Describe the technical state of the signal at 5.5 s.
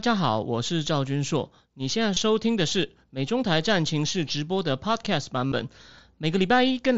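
At 5.5 s the headset link dropped a short run of voice packets between about 5.48 and 5.52 s. The gap, roughly 52 ms, fits about seven consecutive 7.5 ms mSBC frames. This is concealed Bluetooth headset packet loss. Instead of leaving silence, the receiver filled the hole by repeating the best-matching stretch of the most recent speech, so the run is heard as a brief buzzy, steady tone at full level, ending in a slight warble as real speech resumes over the wideband headset codec.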